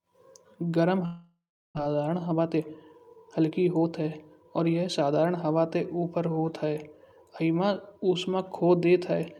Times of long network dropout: 1.05-1.79

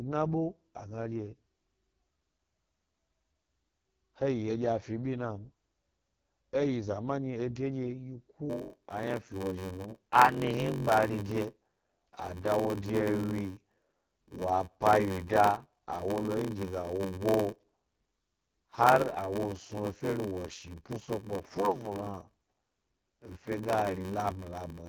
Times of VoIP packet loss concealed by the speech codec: none

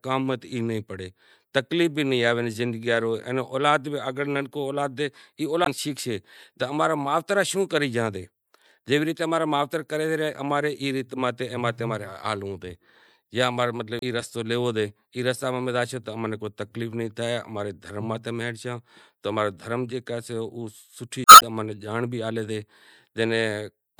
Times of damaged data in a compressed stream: 5.63-5.68, 13.99-14.04, 21.23-21.43

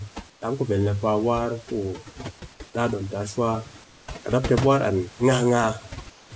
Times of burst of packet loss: none

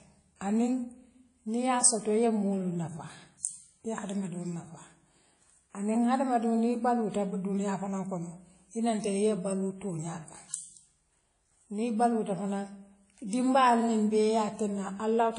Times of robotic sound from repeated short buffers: none

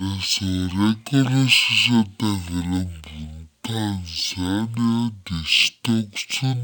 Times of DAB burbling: none

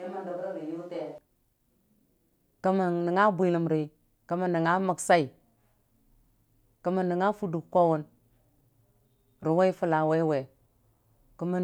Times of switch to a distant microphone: 0.00-1.18

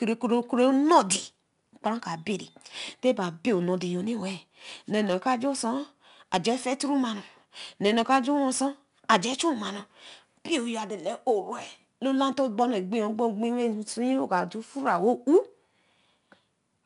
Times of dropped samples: 5.46

